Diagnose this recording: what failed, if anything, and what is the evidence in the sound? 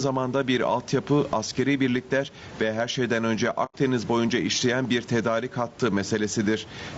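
The level pumps with a swing of around 15 dB, squashing loud and soft parts together. This is gain pumping in the call processing stage, likely from gain set too high and a fast limiter clamping it.

Throughout, the speech sounds rough and grainy, with noise filling the gaps between harmonics and a synthetic-sounding top band. This points to low-delay AAC compression at the codec stage, likely AAC-ELD at a low bitrate around 32 kbps, where short frames resolve pitch poorly.

From 3.65 to 3.75 s the sound fades out to silence and back in, a soft-edged hole of about 90 ms. This is AAC frame loss with muting on the network path. The decoder zeroed the missing spectrum, and the length fits three lost frames. The room noise, about 29 dB below the speech, drops out with it.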